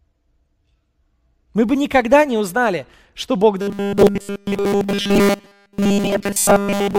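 From 3.61 s to the end, the speech becomes robotic sound from repeated short buffers: a rigid 200 Hz metallic buzz, likely from a 5 ms buffer being repeated throughout.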